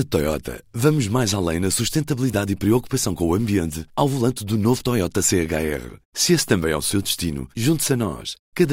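No technical faults are audible.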